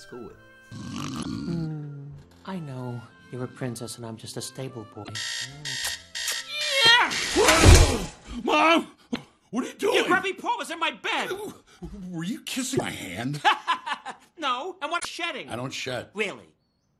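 Damaged data in the compressed stream makes the decoder misread frames and lose sync, producing brief glitches at 1.19–1.26, 5.00–5.10, 9.11–9.16, 12.74–12.82 and 14.96–15.05 s.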